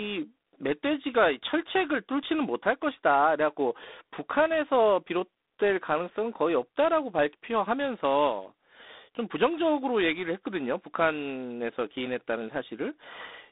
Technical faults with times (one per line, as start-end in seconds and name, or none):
0.00-13.52 G.726 ADPCM